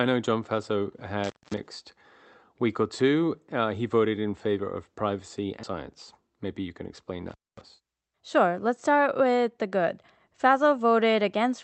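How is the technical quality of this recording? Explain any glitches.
The recording has three clear glitches: two brief dropouts from a loose connection and one jump forward in the speech. The audio passes through a call codec that limits content to about 8 kHz.

Intermittent contact occurs at 1.24–1.58 s and 7.30–7.61 s. A plug or cable briefly lost contact, opening the line for about 0.21 s and 0.24 s. Each time the speech cuts out, with crackle at the edges and only faint hiss between. On a waveform, this appears as a near-flat stretch bracketed by sharp spikes. A spectrogram shows vertical broadband streaks at each end.

A skip ahead happens at 5.63 s, right after "in favor of privacy." Roughly 0.7 s of speech was dropped while later audio was already queued, and the two sides are joined with almost no gap. On a spectrogram, the speech patterns change abruptly at one vertical seam, with no silence between them.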